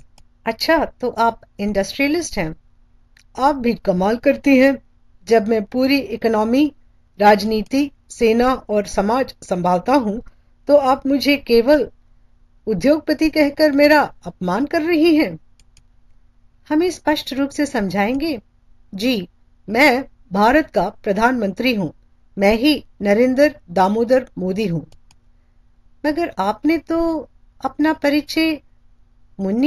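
Throughout, imaging from linear upsampling, which fits a 16 kHz source raised to 48 kHz, dulls the top and leaves faint mirrored energy at 8–16 kHz, roughly 30 dB down, heard as a light metallic shimmer on sibilants and high notes.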